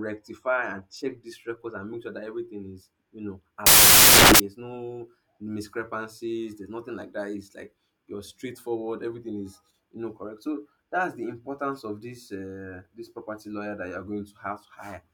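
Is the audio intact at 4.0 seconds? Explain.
No, from 3.66 to 4.40 s, between "everything is you know" and "no discrepancies", loud, harsh broadband noise replaces the speech: samples built from the wrong bytes, so the fast-changing low bits dominate each value.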